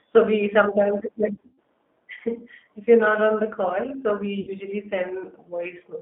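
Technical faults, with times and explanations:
Throughout, G.729 codec: the speech was carried at 8 kbit/s by a G.729A-style coder that rebuilds each 10 ms frame from a vocal tract filter, pitch predictor and a few pulses, within a 250 Hz to 3.6 kHz line band, leaving plainly audible roughness and a synthetic, narrowband edge.
1.34 to 1.59 s, VoIP packet loss concealed by the speech codec: after "we sometimes like", about 180 ms of packets went missing across 240 ms, the longest run 120 ms, and the decoder extrapolated its last pitch and filter at falling gain, so the sound smears into a fading, stretched sound and stays weak afterwards.
4.41 to 4.51 s, VoIP packet loss concealed by the speech codec: after "the call so we", roughly 60 ms was lost and concealed the same way, giving a briefer stretched patch that fades before the decoder's state recovers.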